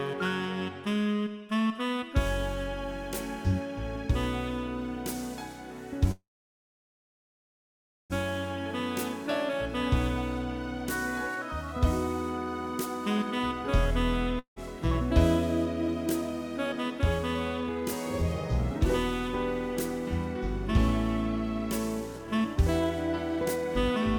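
At 6.11 s a call audio freeze begins, lasting until 8.13 s, likely from packets held up until the jitter buffer ran empty. A brief fading buzz gives way to about 1.87 s of silence, and the sound then resumes where it stopped, with nothing lost. The waveform shows a short decaying tail and then a flat line. On a spectrogram, smeared bands fade into a blank column about 2 s wide.

A long network dropout follows at 14.39 to 14.59 s. The last sound is stretched into a fading hiss, then about 110 ms of silence, and the audio returns with 680 ms missing. The signal jumps straight from the flat stretch into later material, and the delay drops by roughly half a second.

Jitter buffer speed-up runs from 15.65 to 18.86 s at 106% and from 22.13 to 23.95 s at 112%. Each time, roughly 0.2 s is trimmed away in pitch-period slices, so the audio sounds hurried but keeps its pitch. On a spectrogram the harmonic spacing stays the same while events sit closer together in time.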